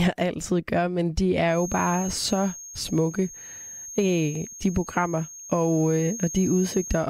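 A loudspeaker-to-microphone loop likely sitting just at the edge of feedback produces a feedback whistle from 1.44 s, right after "altid gør men de", to the end: a thin, steady 6.5 kHz tone around 15 dB beneath the speech, swelling and fading slowly in level.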